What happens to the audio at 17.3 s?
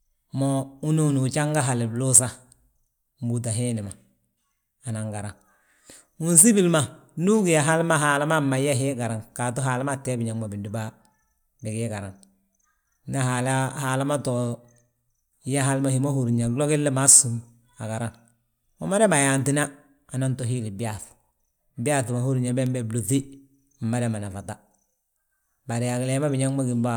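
Nothing goes wrong at 17.3 s; the speech continues there without any audible fault.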